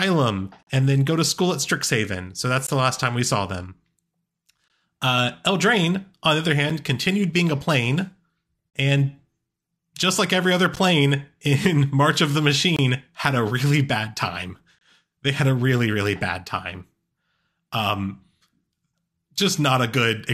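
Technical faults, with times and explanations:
0.63–0.67, 2.67, 4.68, 6.70, 8.70–8.74, 10.76, 12.76–12.79 and 14.79–14.81 s: gap between stream segments. Hard-edged silences of 7 to 42 ms interrupt the speech about every 2 s. The first falls just before "and then go to". Adjacent segment timestamps leave small holes that the player fills with silence, so no audio is lost.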